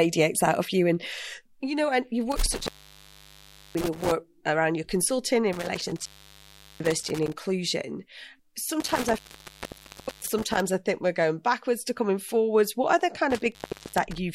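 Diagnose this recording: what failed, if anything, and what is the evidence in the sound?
Intermittent contact in the analogue wiring, four times: 2.32–4.12 s, after "you know and you" and before "around your consulting in"; 5.53–7.33 s, after "around your consulting in"; 8.80–10.60 s, before "I think we're going"; and 13.31–14.18 s. A loose plug or cable opens the signal path, and the speech cuts out for about 1.07 s, 0.75 s, 1.04 s and 0.39 s. Crackle marks each break and return, with faint hiss while the line is open.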